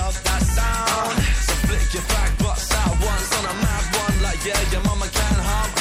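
MP3 compression artefacts run through the whole clip, plainly audible, with the treble cut off and faint detail shimmering in and out with a watery, swirly quality. This is likely a low-bitrate MP3 encode, which fits about 64 kbps, where the encoder drops weak frequency lines frame by frame.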